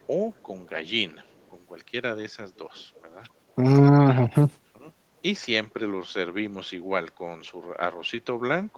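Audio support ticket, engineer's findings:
Echo leak, 2.78–3.01 s: faint delayed copy of the speech, about 252 ms behind, very low, well under the direct signal. Likely cause: far-end loudspeaker pickup not fully removed by that side's echo canceller, residual returned.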